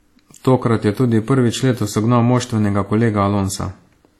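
Throughout, the speech carries two layers of compression artefacts at once, a smeared, watery texture over grainy swirl, with nothing above 18.3 kHz. The likely cause is transcoding between lossy codecs: audio consistent with WMA around 48 kbit/s re-encoded as HE-AAC around 40 kbit/s.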